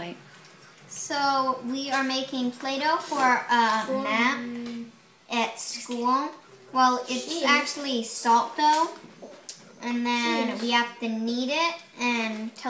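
No technical faults are audible anywhere in the audio.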